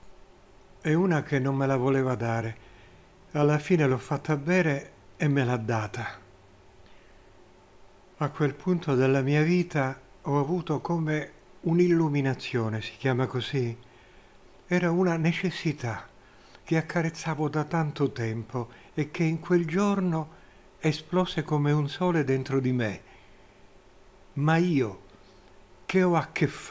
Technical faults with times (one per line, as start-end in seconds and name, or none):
none